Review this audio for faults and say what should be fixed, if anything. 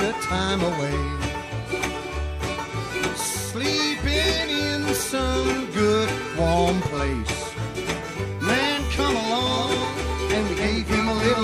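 From 9.46 s to the end there's a doubled audio track: a second full-band copy lands around 300 ms behind, roughly 5 dB down, dry and switching on abruptly. Likely a second capture path or a misaligned edit. Check routing so only one source feeds the mix.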